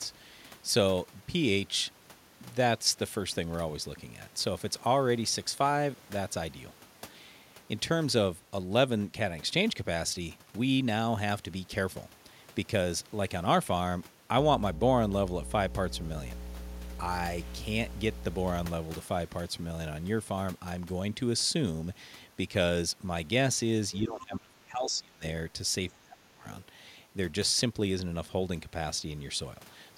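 From 14.39 to 18.66 s, a steady 60 Hz mains hum sits under the speech, roughly as loud as the voice itself. A ground loop or nearby transformer has coupled the power line into the signal. It is a fixed, pitched low tone that does not follow the speech's rhythm, which sets it apart from broadband rumble or handling noise.

Within that stretch, from 17.10 to 17.83 s, a distortion appears, most likely a stuck bit: one data bit held at a fixed value by a faulty line or converter. Values are knocked off by that bit's weight in a pattern that follows the waveform. Unlike clipping, which flattens only the loudest peaks, this error rides along at every level and fills the quiet gaps with noise.

At 23.92 to 23.96 s there is a brief, faint scrap of a second voice, far below the main talker. This is the other side's voice leaking through, most likely because the talker's loudspeaker played the far end and the echo canceller did not remove all of it from the microphone. 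It is a fragment of a separate talker, not a delayed copy of the main voice, which separates it from an ordinary room echo.

Right after, from 24.01 to 25.24 s and again from 25.89 to 26.45 s, the talker's voice is pushed down deeply, by roughly 25 dB at its worst in the first stretch and roughly 20 dB in the second. This is speech suppressed in double talk, most likely because both sides spoke at once and the canceller attenuated everything rather than separate the near talker from the echo.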